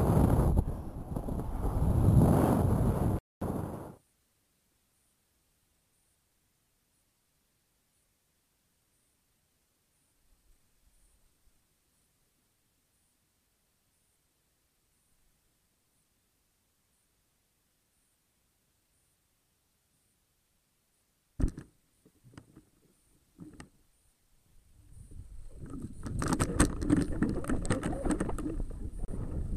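The audio drops to silence twice, once from 3.19 to 3.42 s for about 228 ms and again from 29.05 to 29.08 s for about 31 ms, with the sound picking up again afterwards. These gaps are likely a Bluetooth stall, where interference delayed packets until the headphones' buffer ran dry and playback waited for resent data. On a waveform each shows as a flat gap; on a spectrogram, a clean vertical blank band across all frequencies.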